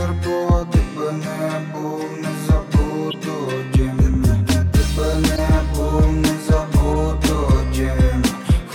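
At 3.10 to 3.14 s, 5.36 to 5.39 s and 6.93 to 6.95 s, short chirps, squeaks, blips or bursts of noise break through: a corrupt frame decoded each time. Flipped bits in the compressed stream gave the decoder wrong gains or codes, and it played them anyway, spraying energy into the wrong bands for about two frames, then one at the last. On a spectrogram each appears as a brief, misplaced vertical smear, and on the waveform as a spike peaking around -15, -10 and -15 dBFS.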